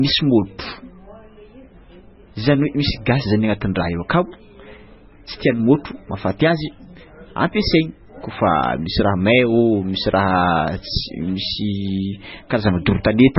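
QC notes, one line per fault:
Throughout, MP3 compression: nothing above about 5.6 kHz, and heavy watery, swirling artefacts where weak frequency lines drop in and out between frames, with chirpy s sounds and smeared onsets. This likely comes from a very low-bitrate encode, around 16 kbps.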